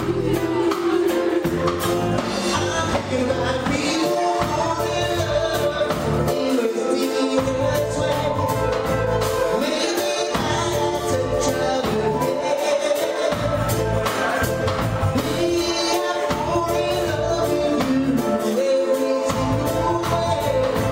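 No technical faults can be heard anywhere in the clip, and the signal holds steady throughout.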